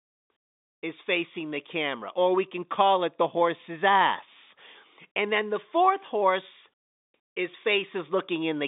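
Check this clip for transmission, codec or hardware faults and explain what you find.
Nothing stood out on listening to this speech, which comes through the narrow 200 Hz to 3.7 kHz band of ordinary G.711 telephone coding.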